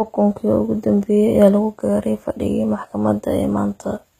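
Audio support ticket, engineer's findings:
Gritty, lispy s sounds and metallic treble throughout, nothing above 14.8 kHz. Likely HE-AAC compression: treble faked from copied lower bands, fits roughly 20 kbps.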